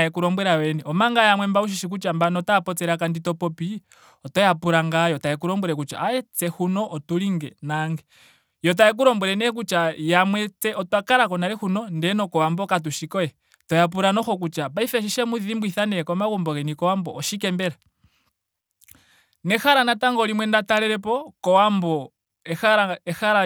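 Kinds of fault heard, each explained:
Nothing here stands out as a technical fault; the speech comes through without any dropouts, glitches or other problems to point to.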